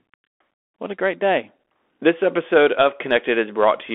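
A speech clip carried throughout by a Bluetooth CVSD headset codec: the band sits at roughly 250 Hz to 3.4 kHz, consistent with a 64 kbps one-bit delta stream. Unlike clean telephone band-limiting, the adaptive step audibly lags sharp transients, leaving scratchy sibilants and granular hiss.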